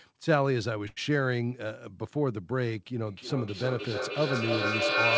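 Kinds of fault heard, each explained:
Short stall from a late packet: A packet arrived late and the jitter buffer ran dry. Around 0.88 to 0.98 s, the receiver holds the last sound for about 85 ms, then resumes where it stopped. Nothing is lost, but the sound drags audibly.
Feedback echo between two devices: Two devices in one room share the call, and each microphone picks up the other's playback. From 3.07 s to the end, the speech returns at roughly 300 ms intervals. The repeats build rather than fade, peaking about 6 dB above the speech.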